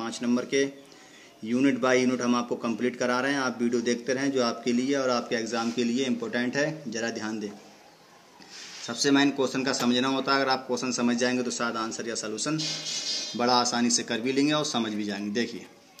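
GSM signalling bursts break into the audio from 12.75 s to 15.67 s. They sound like a galloping dit-dit-dit of short buzzes. The buzz pitch sits near 217 Hz, the rate at which a 2G phone pulses its transmitter. The phone is only signalling, so it sends brief groups of bursts, not a steady stream. The audio circuitry rectifies that radio energy into sound. It sits about 25 dB below the wanted signal.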